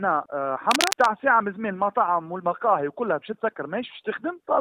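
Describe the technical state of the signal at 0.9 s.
A dense, uneven scratching and rustling sits over the sound from 0.71 to 1.07 s, roughly as loud as the audio itself. This is cable scratch noise, likely from a worn cable, connector or control being moved, its contact resistance fluctuating rapidly.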